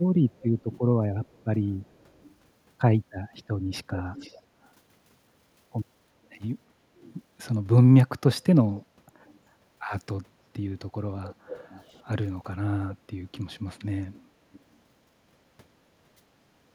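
An echo leak runs through the speech at 0.3–2.35 s, 4.15–4.7 s, 6.31–6.4 s, 7.0–7.14 s, 8.43–9.4 s, 11.24–12.03 s, 13.35–13.39 s and 14.14–14.77 s. A faint, delayed copy of the speech trails it by about 0.34 s, sitting roughly 20 to 35 dB below, loudest near 4.2 s. The likely cause is a loudspeaker echo canceller on the far side letting residue through. Unlike room reverberation, it is a distinct repeat at a fixed lag, not a smooth decaying tail.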